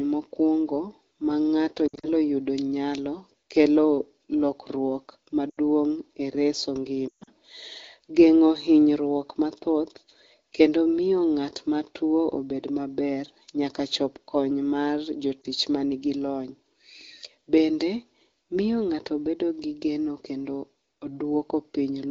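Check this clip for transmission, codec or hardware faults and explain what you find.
Lost AMR speech frames occur at 1.88–2.08 s, 5.50–5.58 s, 7.07–7.30 s and 15.42–15.45 s. The decoder repeats the last good pitch and vocal-tract settings at falling gain, so the speech smears and fades rather than clicking or dropping to hard silence. The 140 ms run near 7.1 s drops to near silence within two frames, and the brief 15.4 s loss is only a dip or warble.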